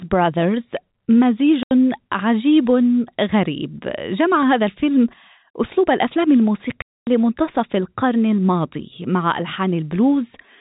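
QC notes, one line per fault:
1.63–1.71 s, packet loss filled with silence: an 80 ms hole cuts the speech with hard edges. The lost stretch was simply replaced by digital silence, and its length fits a run of 10 ms packets.
6.82–7.07 s, packet loss filled with silence: a longer 250 ms dropout with the same abrupt edges. It again fits whole 10 ms packets going missing, set against the band-limited G.711 telephone sound.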